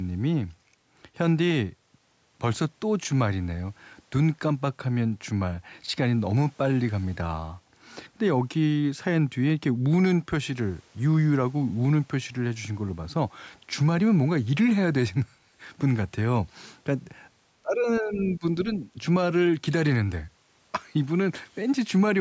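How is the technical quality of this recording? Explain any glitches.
The recording has one glitch, between 17.62 and 18.56 s. The call's echo canceller likely mistook overlapping talk for echo and applied speech suppression in double talk. The speech sinks by roughly 20 dB in patches totalling about half a second. Audio tops out at 8 kHz from the call microphone processing.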